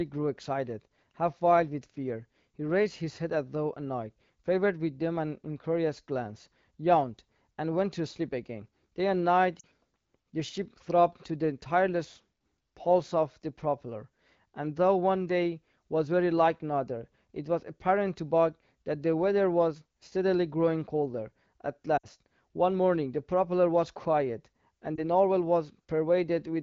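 Lost AMR speech frames at 9.59 to 9.65 s, 21.97 to 22.06 s and 24.95 to 25.00 s: corrupted frames forced the decoder to replay its last pitch and vocal tract settings at falling gain. The 40 and 60 ms runs drop to near silence in the wideband speech, and the 20 ms gap becomes a brief dip.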